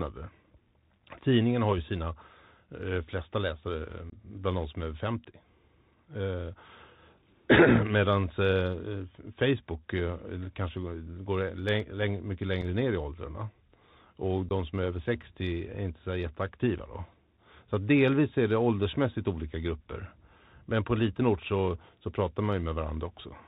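From the start the whole clip sits on a Bluetooth CVSD headset codec, which fits a 64 kbps link: everything above 4 kHz is gone, s sounds come out scratchy, louder bright bits distort as the adaptive step can't keep up, and a grainy hiss rides underneath.

Then there's unconcealed Bluetooth headset packet loss at 4.10 to 4.13 s, at 12.62 s, and at 14.49 to 14.52 s. Each time roughly three, one and two voice packets, roughly 22.5, 7.5 and 15 ms worth, just drop out with nothing filled in, leaving a hard-edged hole, and the speech comes back briefly quieter.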